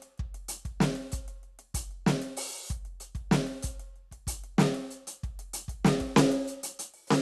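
Throughout the music, the top end stops dead at 12.1 kHz and the treble flickers with a gurgling, granular grit, likely MP2 compression at a rate near 80 kbps. Whole upper sub-bands switching on and off set it apart from MP3's swirly smearing.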